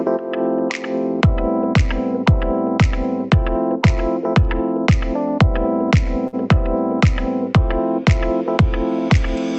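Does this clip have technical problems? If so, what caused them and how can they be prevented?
Yes. A short stall from a late packet is audible at 6.27 to 6.35 s. A packet arrived late and the jitter buffer ran dry. The receiver held and stretched the last sound for about 54 ms until the packet turned up. Playback then resumed from the same point, so nothing is lost. The sound just lingers briefly with a faint buzz or dip. Playback runs about 54 ms later from there on. A slightly deeper jitter buffer or a steadier network path would prevent it.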